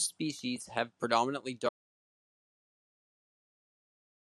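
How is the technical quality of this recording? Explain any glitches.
The recording has one serious glitch: an audio dropout to silence. At 1.69 s, right after "species have predominantly", the speech cuts off mid-flow and the rest of the clip is silence, with no room tone or breath, through to the end. That total absence points to the input signal disappearing, likely through a disconnected device, a broken link or an accidental mute, while the recorder kept writing silence. Whatever followed is lost.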